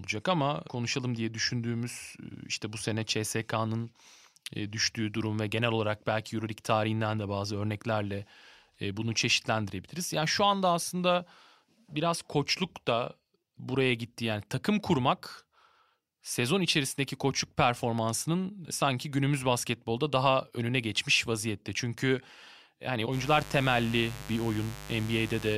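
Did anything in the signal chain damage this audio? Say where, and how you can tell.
Yes. Mains buzz entered through the analogue wiring from 23.1 s to the end at 25.6 s: switching spikes from poor shielding or a nearby dimmer, twice every 50 Hz cycle, produce a steady, raspy buzz with harmonics into several kHz, roughly 15 dB below the speech.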